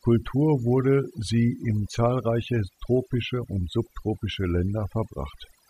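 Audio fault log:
Throughout: overdone noise removal. The noise reduction on this speech was pushed far too hard, so any frequency band sitting close to what it took for noise got pulled way down or gated off. That's why the gaps between phrases collapse into near silence with little twinkling specks, and why the quieter parts of the voice get eaten too.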